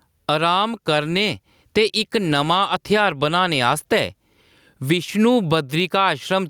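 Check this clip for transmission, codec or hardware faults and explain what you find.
One fault is present. Gain pumping, throughout: likely a far-too-high input gain tamed by a fast limiter, so the level swings around 15 dB and loud and soft parts sit closer together, sounding squashed.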